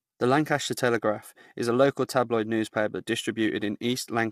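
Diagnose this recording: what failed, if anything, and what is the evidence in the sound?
Codec stage: the speech sounds grainy throughout, likely low-delay AAC compression near 32 kbps. Its short frames smear harmonics, and a spectrogram shows noise filling between them.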